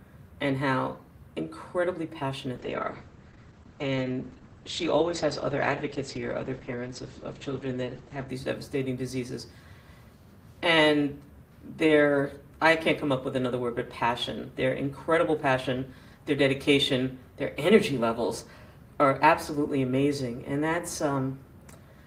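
From 2.57 to 8.35 s there's a call bitrate drop, with coarser coding, likely near 9 kbps, and the top end cut from 12 kHz to 8 kHz before it recovers.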